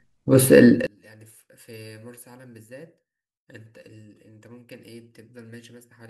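A speech clip where, from 0.87 s to the end, one channel inverted likely causes the shared centre to cancel in mono, leaving the speech about 32 dB quieter.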